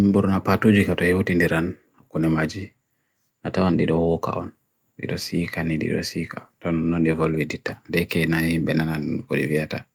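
No technical faults can be heard anywhere in this recording.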